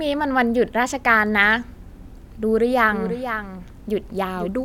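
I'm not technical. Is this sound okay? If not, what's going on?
No. A doubled audio track runs from 2.43 s to the end: a quieter copy of the speech trails about half a second behind, likely captured twice through a slower path.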